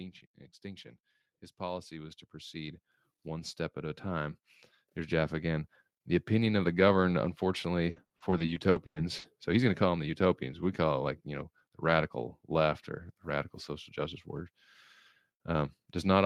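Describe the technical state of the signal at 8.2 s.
At 8.2 s the speech sits inside a burst of repeated packet loss (robotic sound) running from 7.90 to 9.26 s. Ten gaps, the longest 100 ms, are patched by extending the preceding sound, covering about 420 ms or roughly a third of the span. The result is choppy speech with pieces missing. A spectrogram shows smeared, frozen harmonic bands between abrupt breaks, and the waveform shows repeated, overly regular cycles.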